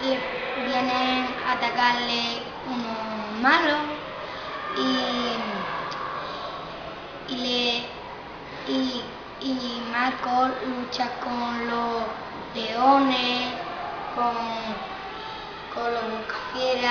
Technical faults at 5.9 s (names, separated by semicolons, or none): none